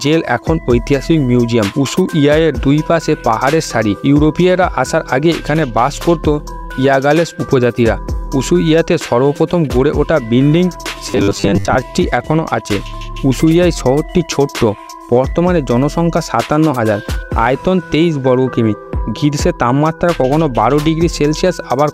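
From 11.11 to 11.77 s the sound turns into a rigid, metallic buzz at 100 Hz: robotic sound from repeated short buffers. The likely cause is audio arriving too seldom, so the playback keeps looping the last 10 ms or so, with roughly half the material replaced by repeats and the rest skipped. On a spectrogram this shows as evenly spaced horizontal harmonic lines at multiples of 100 Hz; the waveform shows identical short segments recurring every 10 ms.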